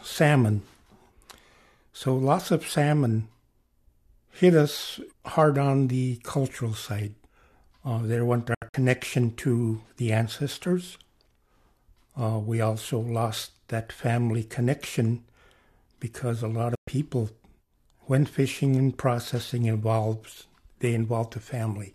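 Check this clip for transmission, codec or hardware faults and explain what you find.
Two digital broadcast dropouts. At 8.54 to 8.74 s and 16.75 to 16.88 s, the receiver lost valid frames and muted, dropping 120 ms each time with 3 ms fades. The first is broken into short holes, the longest 72 ms.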